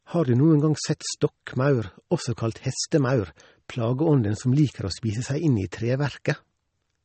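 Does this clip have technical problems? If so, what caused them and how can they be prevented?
Yes. Throughout the speech there's plainly audible damage: nothing comes through above 8.4 kHz, so the top end sounds dull, and the s sounds have a swirly, watery edge with little metallic chirps. That's likely MP3 compression at a low rate, which fits something around 32 kbps. Short of bits, the encoder chops the treble at a fixed point and drops weak frequency lines that flicker on and off between frames. To prevent it, keep a lossless master and encode MP3 at 128 kbps or more for speech.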